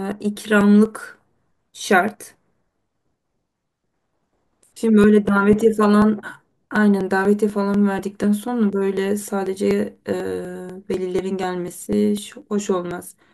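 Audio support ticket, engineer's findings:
Periodic USB or driver dropouts, 0.12–13.16 s: ticks every 0.246 s, roughly 4 ms skipped. Strict regular spacing rules out random cable or codec clicks.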